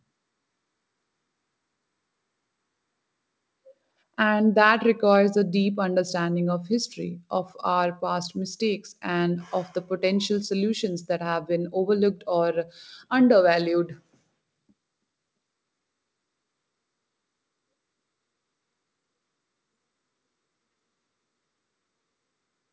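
No technical faults are audible.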